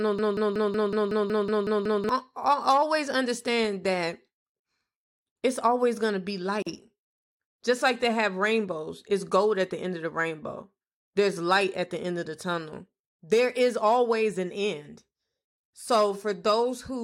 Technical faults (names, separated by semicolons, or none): broken-record loop; gap at a join of encoded pieces